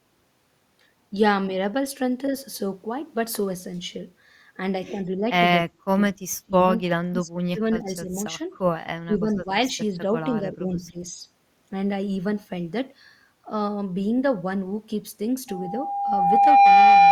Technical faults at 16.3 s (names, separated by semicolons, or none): loudspeaker feedback squeal